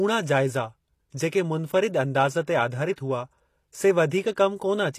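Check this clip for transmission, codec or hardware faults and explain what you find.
Two codec faults are present in this speech clip, one lasting the whole clip and one brief.

Throughout, the audio carries plainly audible damage, likely from HE-AAC compression. The treble is rebuilt from copied lower bands, so harmonics misalign and s sounds turn gritty and metallic. The damage fits a bitrate near 24 kbps. A spectrogram shows nothing above 14.9 kHz, with upper bands that look repeated.

Pre-echo occurs from 2.93 to 2.98 s. The codec spreads its noise evenly across a transform block, so the noise meant for a sharp attack fills the 49 ms before it. This is heard as a brief hiss and a softened onset. On the waveform, a low noisy smear comes just ahead of the transient.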